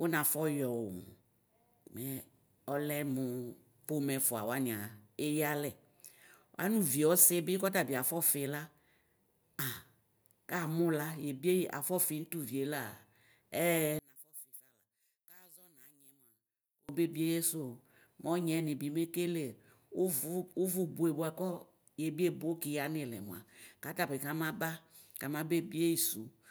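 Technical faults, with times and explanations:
13.99 to 16.89 s, one channel inverted. The speech abruptly falls by about 23 dB. The centred voice and its low end nearly vanish, leaving only a faint residue. The likely cause is one stereo channel with reversed polarity. When both channels are summed to mono, everything they share cancels out. Only the small differences between them survive, so little of the voice remains until the level returns.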